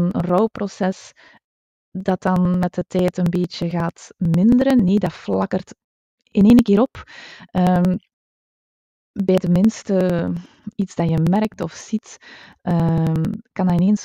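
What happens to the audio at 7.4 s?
At 7.4 s the speech sits inside a run of periodic USB or driver dropouts lasting from 0.11 to 13.97 s: every 0.09 s around 10 ms of audio is skipped outright, giving evenly spaced ticks only while sound is present. That strict regularity separates it from random network packet loss.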